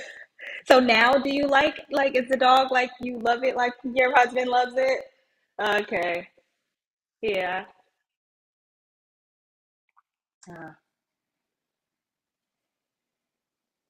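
Periodic USB or driver dropouts stall the audio path every 0.06 s from 0.05 to 13.86 s. Each one skips about 4 ms, heard as steady ticking over the speech. At 3.03 s, audio missing between chunks, likely from a handover between processing blocks, drops about 20 ms and butts the two sides together, causing an audible skip.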